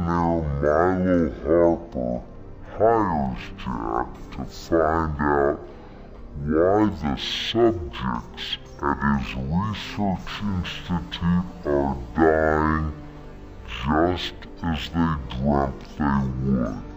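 From the first moment to the end, the sound runs at half speed and a full octave low, the signature of stereo read as mono. The left and right samples, which alternate in the file, have been taken in turn as one channel, so each stereo frame spans two output samples. On a spectrogram the main energy sits squashed into the lower half of the band, with a fainter mirrored copy in the upper half. The waveform looks stretched to twice its natural duration.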